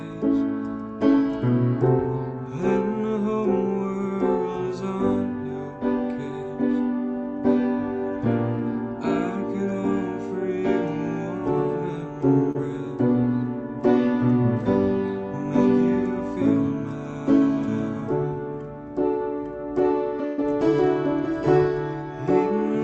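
At 12.51 to 12.57 s, a short concealed packet loss: about 40 ms of audio never reached the decoder in time, so the receiver extended the preceding sound to cover it, leaving a brief smear or wobble. At 20.26 to 20.44 s, a burst of packet loss removed about 120 ms; concealment held the last sound and let it fade before the audio resumed further on, with that stretch missing.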